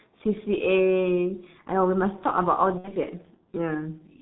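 Speech recorded through a G.723.1 codec, with heavy coding damage across the whole clip. Nothing comes through above 4 kHz, so the voice is muffled, and the codec's slow-moving voice model gives it a hoarse, rough texture. Consonants smear because the 30 ms frames are too long to follow fast transitions. The codec runs in its higher 6.3 kbit/s mode. From 2.78 to 2.93 s there is VoIP packet loss concealed by the speech codec. The dropout fits about 60 ms of missing audio, roughly two lost frames. The decoder fills it by repeating its last pitch and spectral envelope at falling gain, so the sound turns into a buzzy tone or coloured noise that fades. Because each decoded frame depends on the one before, the voice stays weak or distorted for tens of milliseconds after 2.93 s, once packets have resumed.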